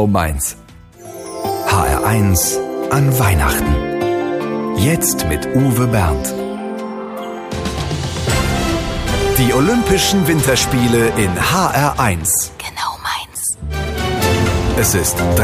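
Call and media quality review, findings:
No audible faults found in the reviewed audio; nothing to escalate.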